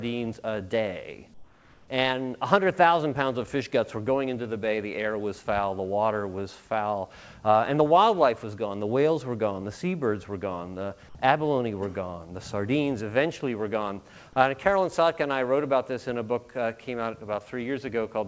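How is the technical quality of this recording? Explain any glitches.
One glitch stands out: comfort noise in place of the background. From 1.34 to 1.88 s, the real background vanishes. A steady, featureless hiss replaces it, about 5 dB quieter. The likely cause is discontinuous transmission. The sender went silent during a pause, and the receiver filled the gap with synthetic noise shaped like the background. The audio also carries nothing above 8 kHz, which fits a wideband call codec such as G.722.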